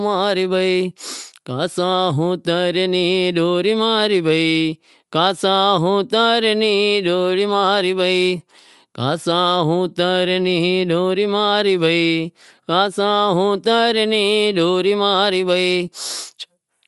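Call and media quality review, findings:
Bluetooth LC3 compression, whole speech clip: plainly audible grainy, breathy edge on the voice. Spectrogram shows a patchy, granular upper band, blocky in very short time slices consistent with 7.5 ms frames. Likely LC3 transform coding, near a 48 kbps bitrate.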